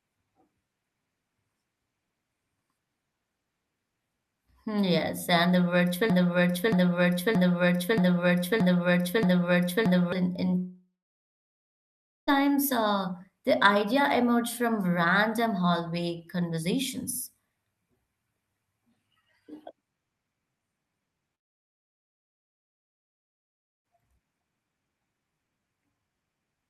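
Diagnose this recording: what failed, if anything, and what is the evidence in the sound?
From 6.10 to 10.12 s the speech sticks in a broken-record loop: a fragment of 0.63 s plays six times back to back, each repeat identical, before the sound moves on. Whatever should have been heard in those four seconds never arrives. The likely cause is a stall at the playback or streaming buffer stage, where the player kept re-sending the last block it held instead of fresh audio.

Two long network dropouts follow. From 10.57 to 12.29 s about 1.7 s of speech is missing: the last sound is stretched into a fading buzz for roughly a third of a second, then about 1.4 s of silence before speech resumes further on. From 21.35 to 23.86 s, 2.5 s is lost, almost entirely as silence. This likely points to packets failing to arrive, with the receiver's concealment filling briefly before giving up.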